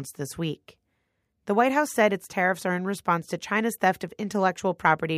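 No technical faults can be heard anywhere in this recording, with the signal holding steady throughout its run.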